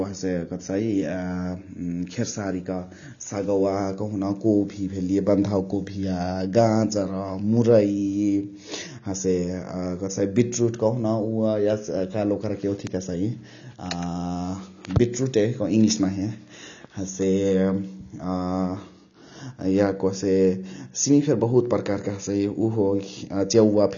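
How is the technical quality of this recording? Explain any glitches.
The technical quality is poor: the speech is held back by codec damage from start to finish. Throughout, nothing is present above about 6.9 kHz, and sibilants sound fizzy and watery. Likely AAC compression at a low rate, around 24 kbps: the encoder drops high bands and smears what remains. A simple low-pass filter would sound clean and only dull, without that warbling texture.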